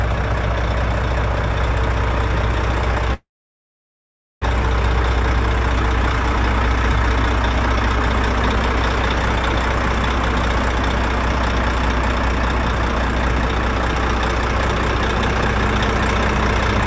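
From 3.14 to 4.44 s the audio freezes, a call audio freeze lasting about 1.3 s, mostly silent. Packets were likely held up until the jitter buffer ran dry. Unlike a dropout, nothing is lost: the sound picks up where it stopped, just later. The band-limiting to 8 kHz fits a G.722 call path.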